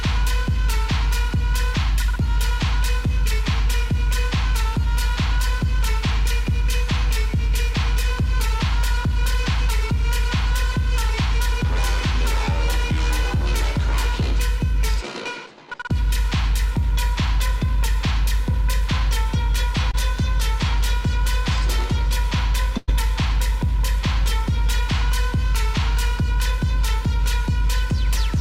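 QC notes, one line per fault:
19.91–19.95 s, short concealed packet loss: about 20 ms of audio never arrived in time, so the receiver filled the gap by extending the preceding sound for roughly 19 ms and blending back into the real signal, leaving a brief smear or wobble.
22.77–22.90 s, burst of packet loss: about 100 ms in a row went missing. The receiver carried the last sound forward for roughly 103 ms, fading it with no silent gap, so a held buzz or dying hiss is heard before the audio resumes further on, with that stretch skipped.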